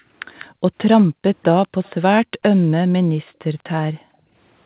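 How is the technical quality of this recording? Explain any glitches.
The recording has two recurring faults from a hands-free call, heard through a narrowband path with nothing above 4 kHz.

Background gated by the echo canceller: at 0.0–0.09, 0.5–0.62, 1.08–1.22, 3.23–3.39 and 3.95–4.34 s, the echo canceller clamped down on the microphone while the loudspeaker played. The room sound dips by about 13 dB at first, then by about 33 to 40 dB, and cuts out for up to 0.4 s before returning.

Echo leak: at 0.39–0.45, 0.98–1.03 and 1.42–1.91 s, a faint copy of the speech arrives 195 ms late. It is clearest in the first scrap and very faint after that. The likely cause is an echo canceller that did not fully remove the loudspeaker's sound picked up by its microphone, so part of it was sent back.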